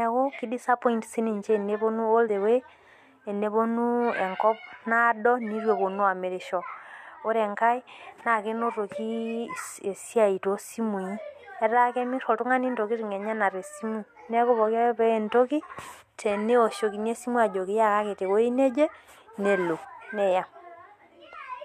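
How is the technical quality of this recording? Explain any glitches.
The recording has one glitch. At 2.28 s, compressed frames are skipped. About three frames of 23.2 ms are lost, so the speech jumps ahead roughly 70 ms.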